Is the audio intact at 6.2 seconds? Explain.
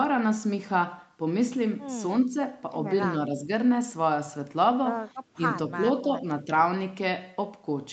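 No. From 6.02 to 6.26 s the speech is suppressed in double talk: the level dips by about 5 dB for a fifth of a second. The likely cause is an echo canceller that couldn't tell the near talker from loudspeaker echo and attenuated both.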